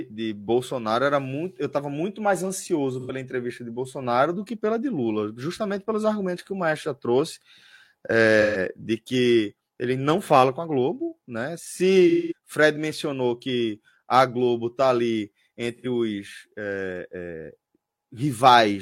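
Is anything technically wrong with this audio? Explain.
Yes. AAC frame loss with concealment at 3.00, 8.41, 12.09 and 15.74 s: the decoder bridges 85 to 213 ms gaps by reusing the last good spectrum, producing brief smeared, noisy patches in the speech.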